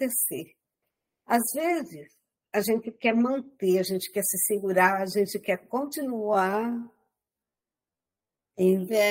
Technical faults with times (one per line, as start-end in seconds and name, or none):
6.11-9.10 time-stretched section